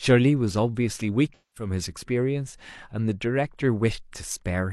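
Here's a short speech clip with one problem: AAC frame loss with concealment, running from about 1.34 s to 1.70 s. Roughly 213 ms of coded audio went missing, which fits about five AAC frames dropped in a row. Rather than leaving a hole, the decoder keeps rebuilding sound from the last good spectrum, with the phase scrambled, so that stretch comes out smeared and noisy instead of as clean speech, then returns once real frames arrive again.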